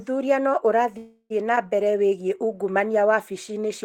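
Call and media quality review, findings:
Call audio freeze, 0.97–1.32 s: speech held as fading buzz, 40 ms silence, resumes intact 328 ms late. Likely jitter buffer underrun, delayed packets.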